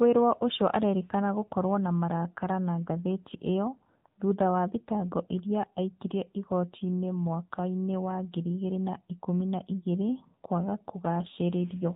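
Throughout, the speech sounds buzzy, synthetic and cut off above 4 kHz, plainly audible AMR narrowband mobile codec damage, consistent with its 7.4 kbps mode.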